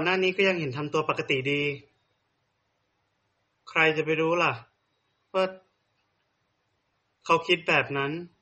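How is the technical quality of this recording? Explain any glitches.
The recording has clearly audible compression damage for the full length of the speech. MP3 compression, throughout: nothing is present above 8.3 kHz, the sort of fixed treble cutoff an encoder applies when it runs short of bits. The degradation is plainly audible and likely comes from MP3 encoding at a low bitrate, around 32 kbps. Starved of bits, the encoder zeroes weaker frequency lines, and what remains sounds dulled and smeared.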